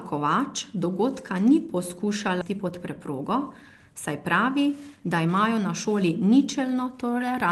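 At 2.41 s a skip ahead drops roughly 0.7 s of speech. The waveform splices directly, with no silent gap, and the spectrogram shows an abrupt discontinuity in the harmonics.

From 2.51 to 6.10 s a jitter buffer speed-up trims pitch periods, running speech about 8% faster at unchanged pitch. Syllables on the waveform look compressed, while harmonic spacing on the spectrogram stays constant.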